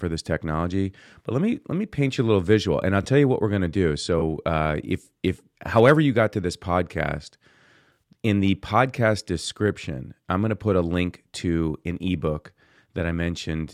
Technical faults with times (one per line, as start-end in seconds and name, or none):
3.03-3.06 corrupt frame concealed
4.19-4.23 corrupt frame concealed
7.93-7.98 corrupt frame concealed